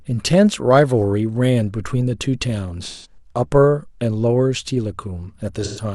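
A smeared, noisy patch replaces the speech from 2.85 to 3.17 s, and again from 5.64 to 5.83 s. This is AAC frame loss with concealment: about 171 ms and 128 ms of frames went missing, which fits four and three frames, and the decoder filled each gap from the last good spectrum.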